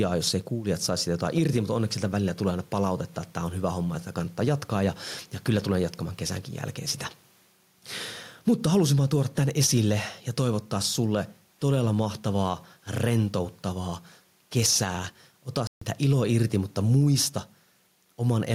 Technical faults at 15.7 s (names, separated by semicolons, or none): gain pumping; playback stall